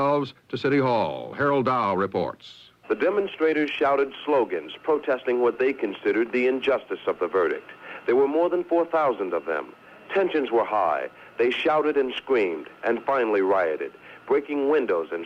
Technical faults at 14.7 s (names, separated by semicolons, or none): none